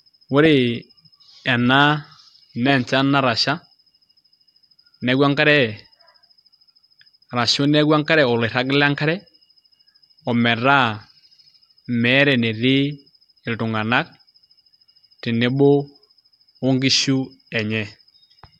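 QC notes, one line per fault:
No faults heard in this speech recording.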